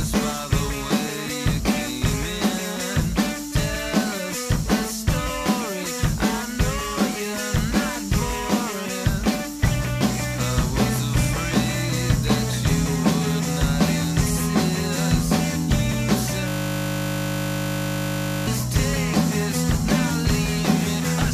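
A system hang loop runs from 16.48 s to 18.47 s. For about two seconds the sound collapses into a steady buzz pitched at 50 Hz. The computer or its audio driver stopped supplying new data, but the playback hardware kept reading the same 20 ms stretch of its ring buffer. That one slice repeats exactly, close to a hundred times, and because the slice is so short, the repetition fuses into a tone rather than a stutter.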